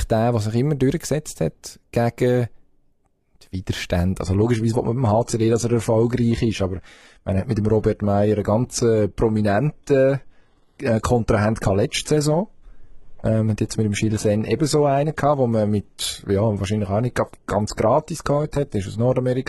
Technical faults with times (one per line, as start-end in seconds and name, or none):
4.20-19.49 adaptive stream at a lower bitrate